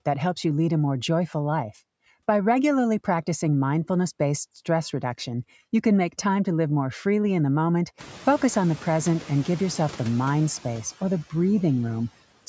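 Noise suppressor artifacts run through the whole clip: background noise is pulled down by about 11 dB, band by band, so it sinks between phrases and swells under the voice. Unlike a noise gate's hard on-off cuts, this works across frequency bands, alongside room noise that rises around 8 s and the call processing's ceiling at 8 kHz.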